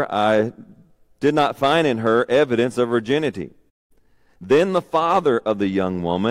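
At 3.69 s, just after "her evidence of virginity", the speech cuts to silence and stays silent until 3.92 s. This is a playback stall, with a gap of about 203 ms. The cause is likely the player running short of buffered data or its output thread being held up, so nothing reached the output until it recovered. It is heard as an abrupt hole in the middle of the flow rather than a natural pause.

From 3.92 s to 4.72 s the player carries out a time-compressed catch-up to recover the delay. It removes short slices of the backlog and cross-fades across the joins, which runs the speech at 1.25 times normal speed while keeping its pitch. Over those 0.8 s the talking sounds rushed but not higher.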